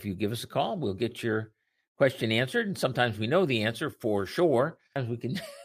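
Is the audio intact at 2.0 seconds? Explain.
Yes, at 2.0 seconds the speech runs through cleanly, with no dropout, click, distortion or other fault to be heard at that moment.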